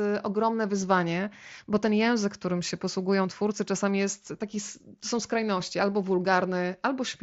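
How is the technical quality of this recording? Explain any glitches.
Nothing stood out on listening to this speech recording; it comes through the wideband Bluetooth headset link without any glitch to point to.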